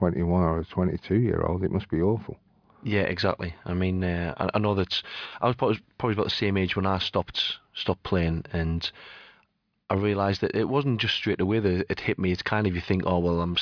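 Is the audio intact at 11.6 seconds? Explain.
Yes, the audio at 11.6 seconds is intact, with the speech continuing without any dropout, glitch or distortion at that point.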